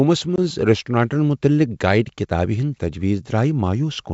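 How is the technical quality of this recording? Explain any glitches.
The speech carries one glitch, on a wideband G.722 link that sounds like the full 64 kbit/s mode. Packet loss on an ADPCM call hits at 0.36 s and runs to 0.39 s. About 20 ms of audio, roughly one packet, drops out. A hard-edged silent hole replaces it. ADPCM codes each sample from the previous state. The decoder's predictor and step size then no longer match the sender's. So the speech returns slightly distorted, settling within tens of milliseconds.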